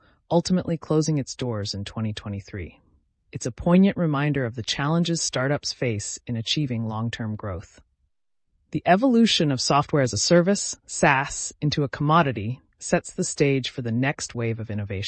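No technical faults are audible.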